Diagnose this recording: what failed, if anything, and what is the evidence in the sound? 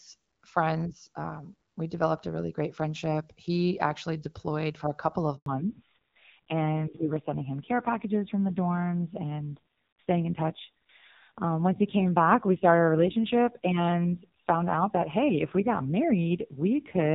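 Network stage: a handover gap at 5.36 s, right after "for a couple of". The sound cuts out for 100 ms while the call switches links.

Codec stage: from 5.46 s on, it's a fallback to narrowband. Nothing survives above 4 kHz, and the sound turns dull and rough, which fits AMR-NB at 5.9 kbit/s replacing the clearer HD Voice.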